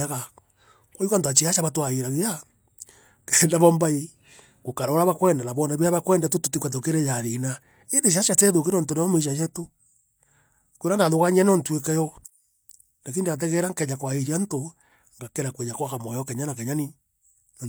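No technical faults can be heard anywhere in this speech recording. There is nothing that calls for a timestamp or an explanation.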